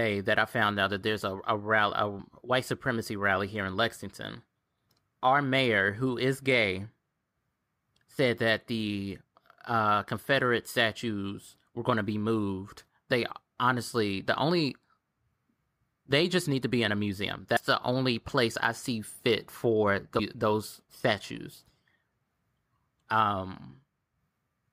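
A speech clip with damaged data in a compressed stream, heard as brief glitches at 2.18 s after "a a rally a", at 17.56 s between "be in a museum" and "the only place I", and from 20.18 to 20.20 s between "I see fit for" and "those statues". These come from the decoder misreading corrupt frames.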